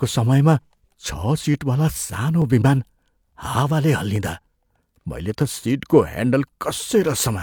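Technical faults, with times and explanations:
0.67–6.78 s, clock drift buffer slips: a regular click through the speech, recurring every 0.87 s. It is likely two devices running on separate clocks about 700 ppm apart, so the buffer between them drifts until a few tens of samples are dropped or repeated, breaking the waveform.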